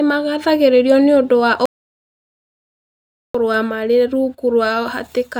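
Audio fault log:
1.66 to 3.35 s: audio dropout to silence. Just after "magathĩrĩirio nĩ ũndũ wa" the speech stops abruptly and the signal falls to silence for about 1.69 s, with no room tone or noise floor underneath, before speech resumes mid-flow. A silent gap with no room tone rather than a quiet pause points to the input path itself going dead, likely a momentary disconnect or mute while the recorder kept writing silence. Whatever was spoken in that span is not recoverable.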